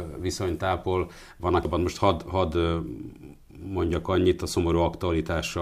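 Damaged data in a compressed stream at 1.65 s, right after "viszonytápol van": corrupted bytes make the decoder misread a frame, lose sync and hunt for the next valid header, giving a brief glitch heard as a chirp, squawk, click or short hole.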